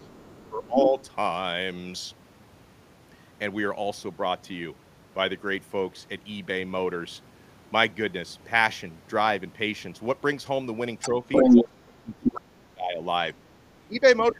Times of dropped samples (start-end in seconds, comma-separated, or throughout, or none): none